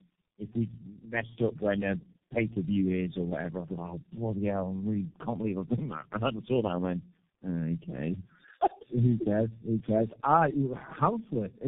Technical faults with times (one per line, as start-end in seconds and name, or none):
0.00-11.68 tandem speech coding